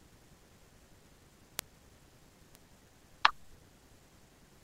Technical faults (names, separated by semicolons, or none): bit error spike